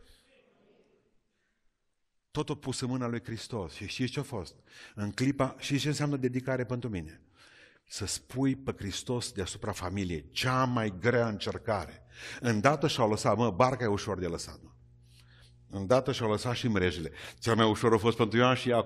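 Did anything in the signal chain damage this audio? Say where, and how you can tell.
Yes. From 9.26 s to the end, mains hum at 60 Hz sits about 30 dB below the speech, an analogue wiring problem, likely a ground loop or nearby transformer.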